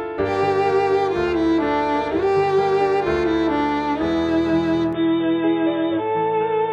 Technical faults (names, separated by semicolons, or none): input switched to a poorer device